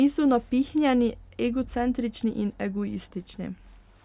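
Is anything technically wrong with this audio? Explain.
No, nothing technically wrong here.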